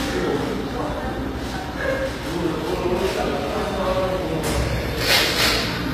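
A short sound recording with gritty, metallic treble that doesn't sit right against the lows and nothing above 15.5 kHz, likely HE-AAC compression at a low bitrate around 24 kbps.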